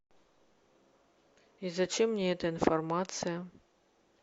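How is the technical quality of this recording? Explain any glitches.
Nothing in this recording trips it up, so there are no glitches to explain.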